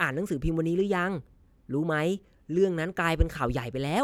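No technical faults can be heard anywhere in the speech.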